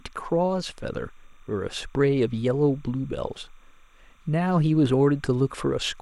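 Timecode bleed runs under the speech from start to finish: linear timecode leaking from a neighbouring track or cable, a square wave flipping between roughly 1 and 2 kHz at 30 frames per second, about 40 dB down. Unlike a steady whistle or hum, it chirps and warbles rhythmically.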